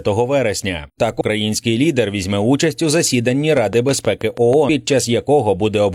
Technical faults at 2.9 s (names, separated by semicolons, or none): none